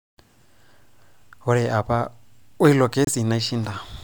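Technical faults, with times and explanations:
3.05–3.09 s, damaged data in a compressed stream: a brief glitch cuts through the speech for about 44 ms. Part of the encoded stream at this point is corrupted, so the decoder misinterprets those frames and emits garbage, then loses frame sync and scans ahead for the next valid header.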